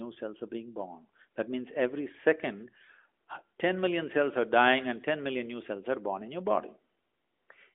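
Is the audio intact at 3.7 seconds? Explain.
Yes, the audio is intact at 3.7 seconds, with no dropout, click or other break at that moment.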